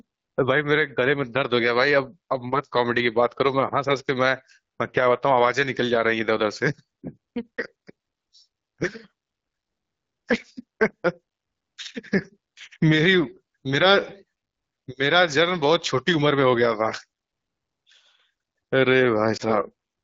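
At 19.37 to 19.43 s, lost AMR speech frames: a corrupted frame forced the decoder to repeat prior settings, causing a brief dip or warble that fits a single 20 ms loss.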